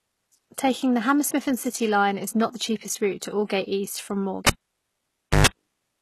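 Speech runs with treble that sounds synthetic throughout: sibilants come out gritty and metallic, and nothing reaches above 12.3 kHz. The damage is plainly audible. The likely cause is HE-AAC compression at a low rate, which fits about 16 kbps. The codec keeps only the lower spectrum and rebuilds the top by spectral band replication, copying lower bands upward under a coarse envelope, so the upper harmonics no longer line up with the true ones. From 4.47 to 5.47 s the sound pops out and drops to near silence for about 0.95 s, with a 117 ms burst of 50 Hz mains buzz, then pops back in. That is a cable pulled and plugged in: the live lead comes out and is reinserted, and the buzz comes from the tip touching before the plug seats.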